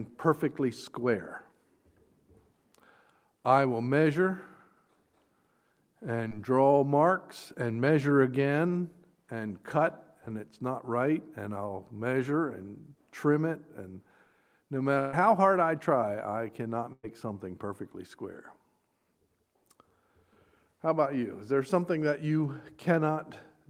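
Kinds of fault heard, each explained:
short concealed packet loss: At about 6.29 s roughly 20 ms of sound failed to arrive in time, and the receiver covered it by extending the preceding sound before blending back. It is a brief smear or wobble, too short to become the held, fading tone of a burst.
burst of packet loss: Longer runs went missing at 14.99 to 15.15 s (about 140 ms) and 16.93 to 17.05 s (about 100 ms). The last sound is stretched into a held buzz or fading hiss, silent for its final 40 ms the second time, and resumes with material skipped.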